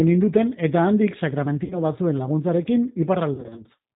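The whole clip carries the sound of the G.729 codec, consistent with its 8 kbit/s mode. The speech is rebuilt from a vocal tract filter, a pitch predictor and a few pulses per frame, with nothing above 4 kHz, so it sounds plainly rough, band-limited and synthetic.

From 1.64 to 1.81 s, VoIP packet loss concealed by the speech codec appears: the decoder repeats its last pitch and filter with falling gain, giving a brief stretched, fading smear. A longer, scattered stretch from 3.34 to 3.64 s sounds weak and distorted as concealment recurs.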